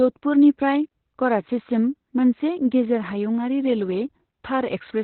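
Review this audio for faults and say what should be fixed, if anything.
Opus voice compression runs throughout. Nothing reaches above 4.2 kHz, and the speech sounds muffled, hoarse and slightly robotic. This fits narrowband SILK at about 8 kbps. Encode at a higher bitrate so the codec keeps the full band.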